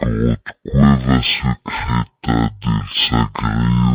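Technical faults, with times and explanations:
Throughout, stereo read as mono: the left and right samples were taken in turn as one channel, so each moment of the speech lasts twice as long. It plays at half speed and an octave low, with a faint mirrored copy in the upper spectrum.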